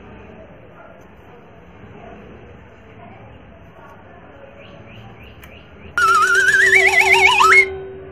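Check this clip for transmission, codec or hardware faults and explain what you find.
No transmission, codec or hardware fault can be heard anywhere in the recording.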